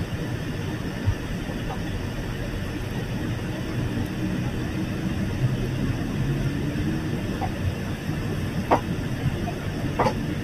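No technical faults are audible.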